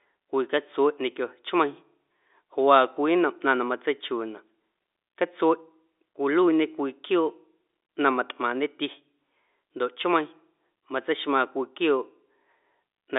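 Nothing's wrong here: it's ordinary speech carried over a standard G.711 mu-law phone line, so the sound simply tops out around 3.8 kHz the way any landline call does.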